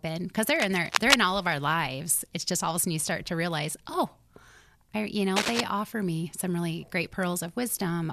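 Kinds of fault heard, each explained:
Cable scratch noise: dense, uneven rustling bursts, about as loud as the speech, likely from a worn connector being moved; a dense scratchy texture rather than isolated clicks.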